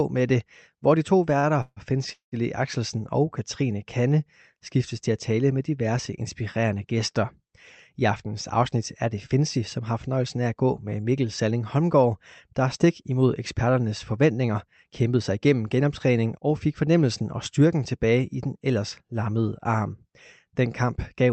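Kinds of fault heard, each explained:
Short stall from a late packet: One packet arrived late and the jitter buffer briefly ran empty. The receiver held the last sound for about 42 ms until it came, just after "det hvor de to", giving a slightly drawn-out, faintly buzzy moment with nothing lost.
Call audio freeze: Packets were likely held up in transit, emptying the jitter buffer. The receiver drew the last sound out into a fading buzz and then silence, inserting pauses of about 150 ms near 1.6 s and 195 ms near 2.1 s, before the speech resumes where it stopped.
Jitter buffer speed-up: The buffer held more audio than its target, so the receiver repeatedly trimmed tiny pitch-period slices, removing about a tenth of a second in each stretch. Speech runs about 5% fast before "fornøjelsen af at gå" and about 9% fast after "der stik imod eksperternes", at unchanged pitch.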